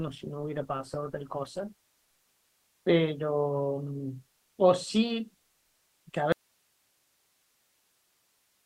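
For the first 2.0 s the speech is dull and swirly, the sound of an adaptive stream starting at a low bitrate while the player measured its connection. The thin start fits a low-rate Opus stream near 16 kbit/s that then steps up to about 64 kbit/s. On a spectrogram the upper band is empty or smeared, then fills in abruptly at 2.0 s with no gap in the waveform.

At 6.32 s the sound cuts out mid-flow and only hiss remains until the end, an audio dropout to a faint residue. Its likely cause is the source signal being lost while the downstream path stayed live. The waveform collapses to a thin band of noise about 45 dB below the previous level, and the spectrogram shows a flat, even noise floor.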